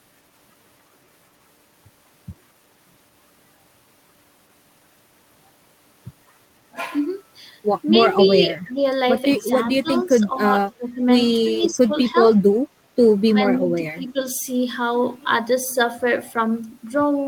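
At 8.25 to 8.29 s there is a brief echo leak. A faint copy of the speech returns about 250 ms late, roughly 20 dB below the talker. The likely cause is a loudspeaker whose echo canceller let a scrap through.

Speech is then suppressed in double talk at 8.27 to 8.81, 9.36 to 10.43, 10.75 to 11.01, 11.45 to 12.16 and 13.28 to 14.17 s. The talker dips by roughly 10 to 20 dB in pieces. An echo canceller likely misread simultaneous talk as echo.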